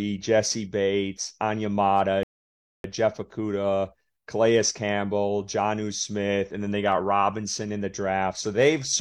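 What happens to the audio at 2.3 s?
The player's buffer ran dry at 2.23 s, a rebuffering stall, so playback halted until more data arrived. The speech drops to silence until 2.84 s, then picks up exactly where it stopped, losing nothing but adding about 0.61 s.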